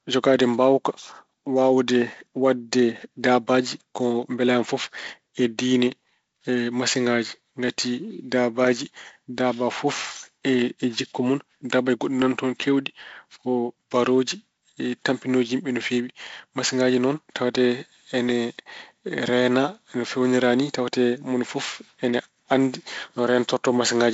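Nothing stood out on listening to this speech, which is carried over G.722 wideband telephone coding with nothing heard above about 7.7 kHz.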